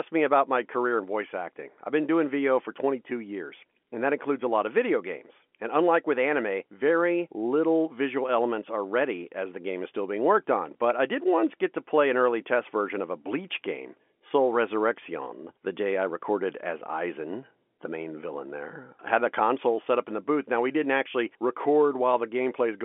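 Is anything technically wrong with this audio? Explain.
No, nothing is technically wrong: this is speech carried over ordinary G.711 telephone coding, so it is confined to the telephone band of roughly 300 Hz to 3.4 kHz with nothing above about 3.8 kHz, exactly as that path should sound.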